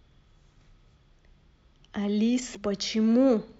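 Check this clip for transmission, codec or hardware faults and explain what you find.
One fault is present. From 2.52 to 2.57 s a short disruption cuts into the speech: damaged data in a compressed stream, where corrupted bytes made the decoder lose sync and jump to the next frame header.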